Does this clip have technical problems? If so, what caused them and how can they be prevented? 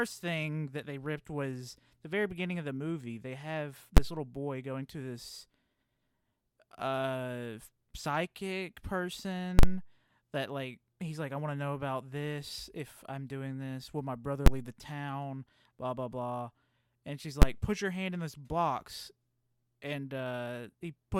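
Yes. Invalid numbers at full scale cause loud bangs at 3.97 s (before "little boy going to"), 14.46 s (before "leave the town blah") and 17.42 s (before "put your hand in"), which fits 512-sample blocks. At 9.59–9.63 s a longer block gives two pops with silence between. A calculation produced infinite or invalid values that were clamped to maximum level. They appear as flat slabs far beyond the speech peaks on the waveform and full-height vertical stripes on the spectrogram. Checking the processing for non-finite values and replacing them before output would prevent this.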